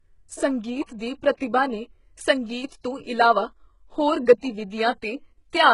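Speech whose treble sounds heavily processed throughout: the top end is gritty and metallic, its harmonics don't line up with the lower spectrum, and nothing is present above 11.1 kHz. This is likely HE-AAC compression at a low bitrate, around 12 kbps, where spectral band replication rebuilds the treble by copying lower bands upward under a coarse envelope. At 0.98 to 1.01 s, just before "ਦੀ ਪ੍ਰਤਿਭਾ ਨੇ", a 24 ms hiss runs ahead of the attack and softens it. This is pre-echo: the codec spread quantisation noise sized for the loud onset across its whole block, including the quiet moment before it. From 2.50 to 5.56 s, about four ticks recur every 1.02 s. These are periodic USB or driver dropouts: something blocks the audio path at a fixed interval, and roughly half a millisecond of signal is skipped each time, leaving a click in the waveform.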